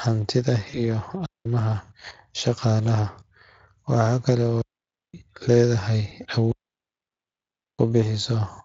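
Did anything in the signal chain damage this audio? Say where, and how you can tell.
Yes, at two stages. The first is the network, where there is VoIP packet loss concealed by the speech codec. At 0.69 to 0.77 s, and again briefly at 6.09 to 6.13 s, the speech smears into a buzzy tone or coloured noise that fades instead of breaking off. The decoder is repeating its last pitch and filter with falling gain. On a spectrogram the harmonics run flat and dim, and the damage trails past the gap. The first event fits two lost 20 ms frames and the second fits one.

The second stage is the radio link, with digital wireless dropout. Right after "hantida iyo" the audio mutes from 1.26 to 1.46 s. Longer mutes follow from 4.62 to 5.14 s and from 6.52 to 7.79 s, the last lasting about 1.3 s. Each is a clean hole with a very short fade and no noise burst on either side. The receiver is muting when too much data is lost. 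The waveform shows flat-line gaps, and the spectrogram shows blank vertical bands with sharp edges. Speex coding at 23.8 kbps runs through the clip, and its light coding damage sits beneath these events.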